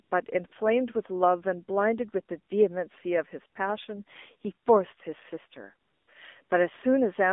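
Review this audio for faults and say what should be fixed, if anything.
The speech runs through an AMR narrowband mobile codec, limited to about 250 Hz to 3.6 kHz, and its buzzy, synthetic tone fits the 7.4 kbps mode. AMR comfort noise replaces the real background with smooth synthetic noise at 0.04–0.12 s, 0.48–0.52 s, 5.88–6.08 s and 6.44–6.50 s, because the phone stopped sending speech frames during those gaps. To fix both, use a wideband codec at a higher bitrate and disable discontinuous transmission.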